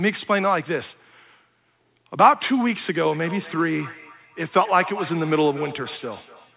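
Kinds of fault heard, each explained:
Feedback echo between two devices: from 3.11 s on, each word returns roughly every 200 ms, thin and ringing, about 16 dB below the speech. A second device in the room replays the call, and this microphone recaptures it beyond its echo canceller's reach.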